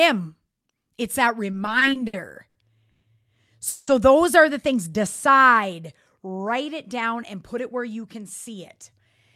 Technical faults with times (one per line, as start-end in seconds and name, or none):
1.51-3.05 repeated stalls (stutter)
3.68-3.90 call audio freeze
4.91-5.68 jitter buffer slow-down
7.54-9.00 jitter buffer speed-up